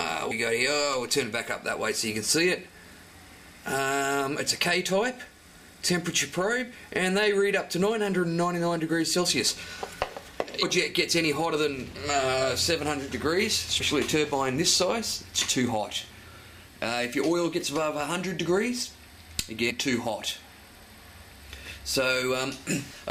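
Damaged data in the compressed stream causes short blips at 0.30 s, 10.61 to 10.63 s, 13.79 s and 19.69 to 19.71 s. The decoder misreads corrupt frames, then resyncs.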